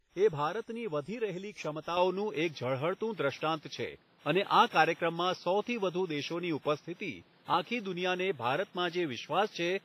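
WMA compression, throughout: heavy transform-codec damage, likely from a low bitrate around 24 kbps, leaves washy, ringing smear with breathing hiss and nothing above 15.6 kHz.

Input switched to a poorer device, from 1.97 s to the end: with no gap, the band closes to nothing above 5.9 kHz, level shifts by around 5 dB, and new background noise sits roughly 35 dB down.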